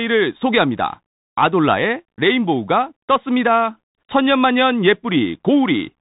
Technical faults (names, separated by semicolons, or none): Bluetooth CVSD headset codec